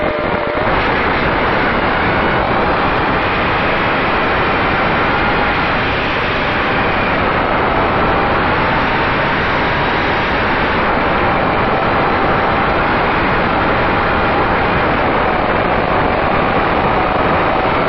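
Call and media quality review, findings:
Nothing to flag on this one; no dropouts, glitches or other transport or device trouble turned up anywhere in the recording.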